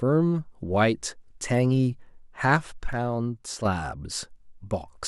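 From 2.93 s to 3.65 s, the likely cause is one channel dropping out: one side of the stereo signal stopped arriving for about 0.73 s, so the mono mix was briefly built from only the surviving channel. The speech drops abruptly by about 6 dB, and anything present only in the lost side vanishes. At 3.65 s the full level snaps back just as suddenly.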